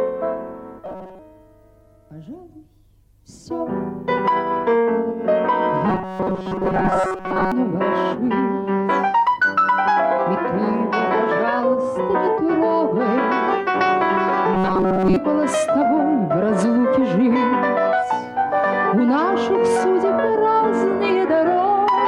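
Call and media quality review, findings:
Robotic sound from repeated short buffers at 0.86–1.19 s, 5.90–7.52 s and 14.54–15.16 s: fixed 188 Hz metallic buzz over most of the sound, likely from a jitter buffer looping about 5.3 ms segments. Unlike dropouts, there are no silent gaps.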